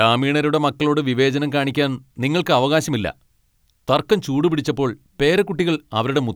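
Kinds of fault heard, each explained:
Nothing stood out on listening to the speech.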